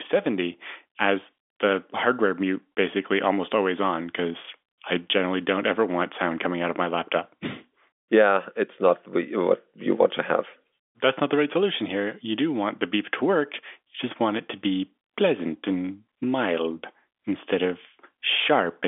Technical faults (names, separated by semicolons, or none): none